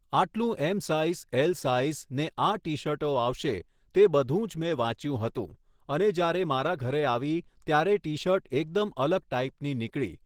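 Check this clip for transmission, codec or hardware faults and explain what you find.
There's one fault. From start to finish it's Opus compression, likely in hybrid mode at about 16 kbps. Bits run short, so bands get noise-filled, leaving the speech hoarse and grainy.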